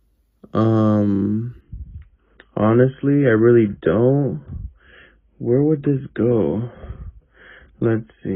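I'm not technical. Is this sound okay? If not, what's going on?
No. From 1.61 s to the end there is an adaptive stream at a lower bitrate: the player switched to a much smaller, lower-quality version, most likely because the connection slowed. The change is sudden with no gap, and everything above 3.8 kHz is gone, so the sound turns dull and muffled.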